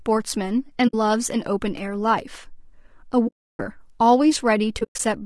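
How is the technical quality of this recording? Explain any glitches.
The recording has two problems: audible coding damage across the whole clip, and three places where the speech drops out briefly.

Low-delay AAC compression runs throughout. The codec behind it is likely AAC-ELD, the low-delay AAC used for video calls, at a low bitrate around 32 kbps. Its short frames keep latency down but capture pitch harmonics coarsely and spend bits quickly. Here the damage is plainly audible: the voice sounds rough and grainy, with noise filling the gaps between harmonics.

AAC frame loss with muting occurs three times. The decoder never received these frames and zeroed their spectrum, and the overlapping windows then fade the sound out and back in. The first hole runs from 0.87 to 0.94 s and is short, about 60 ms, which fits three 20 ms frames. The second, from 3.27 to 3.60 s, is the longest, about 320 ms of silence. 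The third, from 4.79 to 5.00 s, is broken rather than continuous: losses scattered across about 200 ms, the longest run near 100 ms, so the sound flickers in and out.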